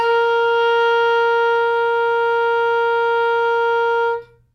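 The music carries no audible technical faults at any point in the clip.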